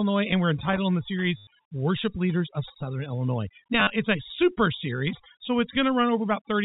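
Speech carried over a G.711 telephone path, so nothing appears above 4 kHz, has overdone noise removal throughout: on a spectrogram the background breaks up into isolated, twinkling specks where bands near the noise floor were cut away. Loose connector crackle runs from 0.58 to 0.78 s, just before "in the", and shows in the waveform as irregular, spiky bursts as a contact makes and breaks. Packet loss with the last packet repeated produces a short robotic stutter from 1.37 to 1.47 s, just after "in the". There, 100 ms of audio is replaced by repeats whose buzz fits 10 ms packets, and the spectrogram shows a regular, repeating stripe pattern. It happens again from 3.8 to 3.9 s, just before "it's a super series", with 70 ms lost in scattered gaps, the longest run 50 ms.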